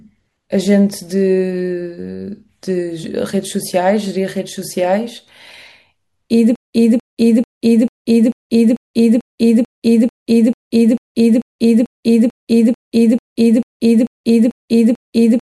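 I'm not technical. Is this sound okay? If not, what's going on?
No. From 6.56 s to the end, the speech gets stuck: the same quarter-second snippet repeats about every 0.44 s, with short dead-silent gaps between. This stutter with silent gaps likely comes from playback stalling and replaying its last fragment, so the speech that should follow is lost.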